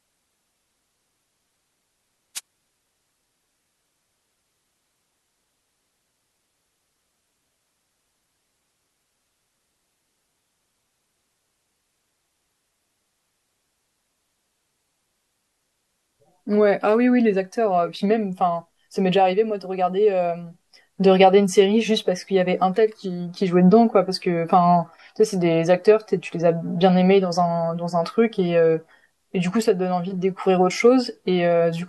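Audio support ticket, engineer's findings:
Wireless microphone noise hit, 2.35–2.40 s. The analogue FM radio link fades as multipath reflections cancel at the receiver, so receiver noise rises into the demodulated speech. Heard as a brief 52 ms swish of static.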